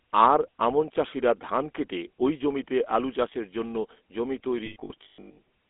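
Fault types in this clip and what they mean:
GSM full-rate codec: The voice runs through the old GSM vocal-tract model, driven by sparse regular pulses, so it has that plainly audible buzzy, gravelly edge. The band sits at roughly 250 Hz to 3.5 kHz, which fits a 13 kbps full-rate stream.
Lost GSM frames: From 4.66 to 5.39 s, bad frames get patched by repeating the last good one. About 480 ms goes missing across that stretch, in runs up to around 150 ms, each heard as a rough, metallic ringing hold.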